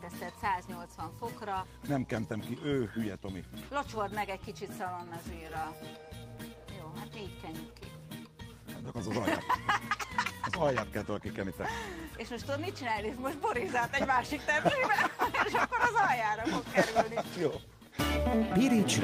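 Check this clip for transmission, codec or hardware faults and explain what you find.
I found no faults to report in this clip.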